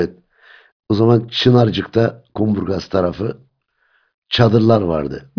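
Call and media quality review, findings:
No faults found in the speech audio; no symptoms heard, no components implicated, nothing to action.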